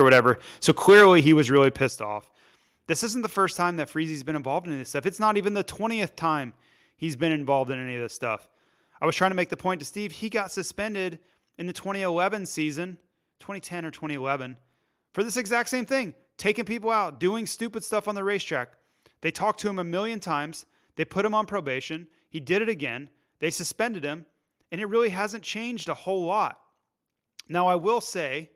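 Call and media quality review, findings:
Call and media quality review, findings:

Hard clipping on speech peaks, 0.0–0.3 s and 0.68–1.57 s. Flattened tops, harsh crackle on loud syllables, peaks about 6 dB and 8 dB past full scale, a few percent of samples cut. Likely microphone overload: input gain too high for the converter.

Sudden level drops of voice and background together at 0.9 s, 1.89 s and 9.78 s, about 3 dB, 7 dB and 2 dB. The first falls inside the second clipped stretch, the second follows it. Likely microphone volume stepped down by call software reacting to clipping.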